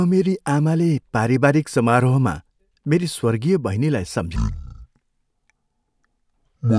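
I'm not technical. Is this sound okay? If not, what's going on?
No. From 4.36 s to the end there is a wrong sample rate: playback runs at half the recorded rate, so the speech drags slowly and sounds an octave deeper.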